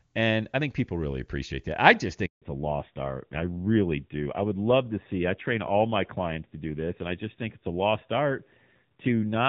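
Speech on a phone call, clear and wideband at first, in a way that fits HD Voice (AMR-WB) at a high rate such as 23.85 kbit/s. Right after "appreciate that I just", a handover gap cuts the sound from 2.26 to 2.42 s. That is 160 ms of silence. The call was passed between networks, and no frames arrived during the switch, so that stretch is simply lost. From 2.42 s to the end, a fallback to narrowband takes over. Nothing remains above 4 kHz. The speech turns duller and rougher, which fits a drop to AMR-NB at about 7.4 kbit/s.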